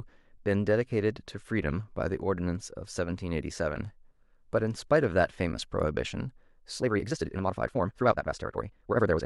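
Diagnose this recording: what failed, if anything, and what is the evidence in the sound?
A time-stretched section is the fault, most likely introduced at the processing stage, where software squeezed the last part of the recording to fit a shorter length. From 6.76 s to the end at 9.26 s, the speech suddenly runs at twice its previous pace while its pitch stays put. The stretcher held pitch by dropping short slices of audio rather than speeding up playback, so the section sounds rushed.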